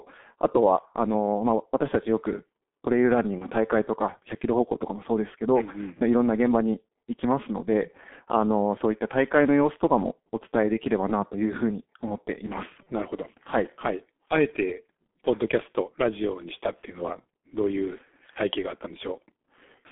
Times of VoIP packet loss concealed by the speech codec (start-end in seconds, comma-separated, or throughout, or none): 3.38-3.46, 12.83-12.88